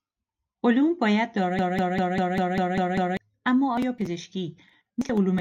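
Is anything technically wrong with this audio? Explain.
Yes. A broken-record loop runs from 1.59 to 3.17 s, right after "علوم باید": a 198 ms fragment repeats exactly eight times, back to back, before "اما آیا". The stream likely stalled and kept resending its last held fragment, so the speech from that span is lost.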